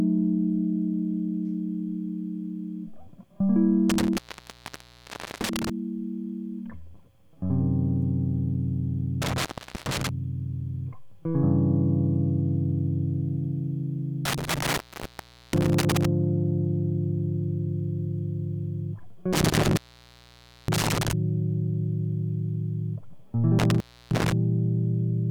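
The music drops out with crackle at each edge and faint hiss in the gap, an intermittent contact, at 3.90–5.70 s (open 1.23 s), 9.22–10.09 s (0.41 s), 14.25–16.05 s (0.76 s), 19.33–21.13 s (0.91 s) and 23.59–24.32 s (0.31 s). A loose cable or plug briefly breaks the signal path each time.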